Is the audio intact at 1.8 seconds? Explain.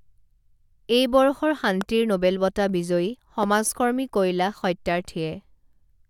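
No. A loud pop hits at 1.81 to 1.83 s, between "এই বৰ্ষৰ" and "নোবেল বঁটা", likely from a brief voltage spike such as static or a switch. It is a single sharp click about 10 dB above the speech, a narrow waveform spike and a thin full-height vertical line on a spectrogram.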